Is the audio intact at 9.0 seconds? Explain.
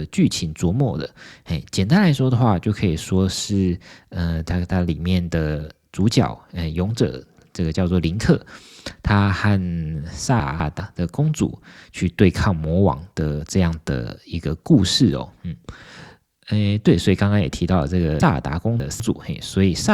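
Yes, the speech at 9.0 seconds plays through cleanly, with no dropout, click, distortion or other fault at that moment.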